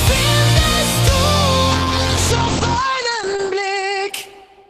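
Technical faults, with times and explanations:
1.72 s onward, call bitrate drop: the encoder's budget fell, fitting 48 to 10 kbps, so coarser coding roughens the sound and bandwidth narrows from 20 kHz to 8 kHz.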